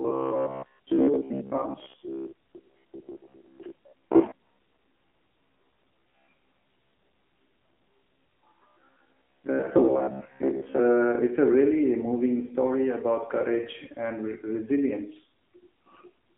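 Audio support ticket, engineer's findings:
AMR narrowband mobile codec, throughout. Speech band-limited to 200 Hz–3.4 kHz. Buzzy, synthetic pulse-excited vocal-tract model, plainly audible; the coarseness fits a low AMR-NB mode, about 7.4 kbps.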